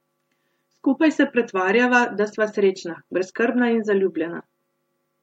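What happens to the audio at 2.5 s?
Nothing goes wrong at 2.5 s: the audio is intact at that moment, with no dropout, click, distortion or other fault.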